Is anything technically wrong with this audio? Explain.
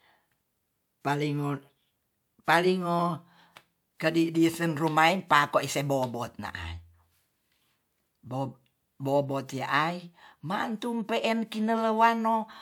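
No, the signal shows no technical faults anywhere in the recording.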